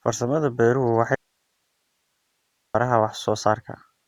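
An audio dropout to a faint residue runs from 1.15 to 2.75 s in this speech recording. The speech cuts out abruptly for about 1.6 s, leaving only hiss roughly 50 dB below it, likely a signal loss upstream while the following path stayed live.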